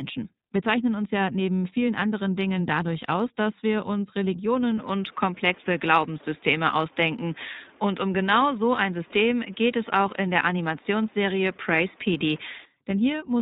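iLBC codec damage runs through the whole speech clip. Each 20 ms frame is coded on its own without drawing on the frame before, and nothing above 4 kHz survives. The speech has a plainly audible rough, synthetic edge, which fits the 15.2 kbps mode.

From 4.78 s to 12.65 s the sound turns duller and boxier, with nothing left above 3.8 kHz. A faint new noise floor sits well below the speech, and the loudness stays roughly the same. There is no gap at either boundary. The likely cause is the input switching to a poorer device.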